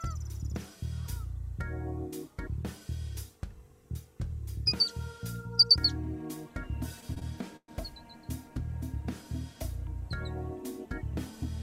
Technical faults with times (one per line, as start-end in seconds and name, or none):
7.00-7.69 repeated stalls (stutter)